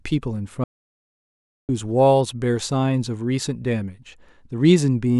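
At 0.64 s the speech cuts off abruptly into an audio dropout to silence lasting until 1.69 s, 1.05 s of silence with no room tone. The input was likely lost while recording continued, and the speech in that stretch is gone.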